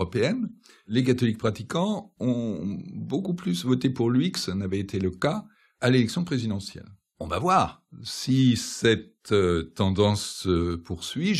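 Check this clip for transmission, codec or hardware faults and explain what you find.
One fault turns up in this speech clip: dropped samples at 3.82 s. A fraction of a millisecond of audio likely went missing from the stream, so the waveform jumps straight to a later value. That discontinuity is heard as a single sharp click, too brief to remove any audible sound.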